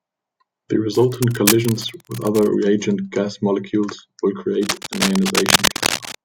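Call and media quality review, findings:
Cable scratch noise, two bursts. Likely a worn cable, connector or control being moved, its contact resistance fluctuating fast and injecting dense, irregular noise. 0.93–2.47 s: scratchy rustle under the speech, about 10 dB below it, ending just before "reagent gas molecules will". 4.63–6.15 s: same scratching right after "reagent gas molecules will", now roughly as loud as the speech and competing with it.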